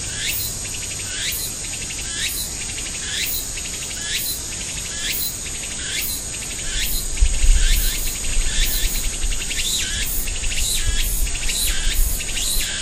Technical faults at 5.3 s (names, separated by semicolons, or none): none